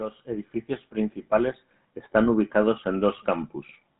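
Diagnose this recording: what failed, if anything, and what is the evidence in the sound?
Codec stage: the speech has the buzzy, gravelly roughness of the GSM full-rate codec throughout, with nothing above 3.9 kHz. Its sparse pulse excitation fits a 13 kbps stream.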